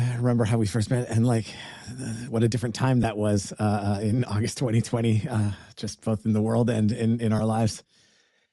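Bluetooth LC3 compression runs through the whole speech recording, heard as a grainy, breathy edge on the upper part of the voice that is plainly audible. The coarseness is likely from LC3, the LE Audio transform codec, whose encoder is dropping upper-spectrum detail and filling the gaps with shaped noise. The amount of damage fits a rate in the region of 48 kbps with 10 ms frames.

Lost LE Audio frames cause a brief break at 3.03 s, right after "what a different time" and before "was uh uh in", and a second at 7.39 s, after "world and in in". Each gap lasts about 10 ms, which points to a single missing frame. The decoder covers the hole by repeating the previous frame's spectrum with scrambled phase, so each spot is filled in rather than a clean dropout.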